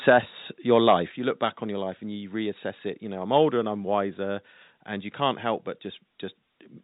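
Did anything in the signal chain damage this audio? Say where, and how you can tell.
Yes. An overdriven microphone input likely overloaded the converter at 0.07–0.19, 0.72–0.95 and 3.36–3.38 s, about 2–6 dB over, flattening peaks into harsh crackle.

Call processing likely stepped the microphone volume down, by about 3 dB at 0.10 s and 6 dB at 1.11 s, so everything abruptly drops in level.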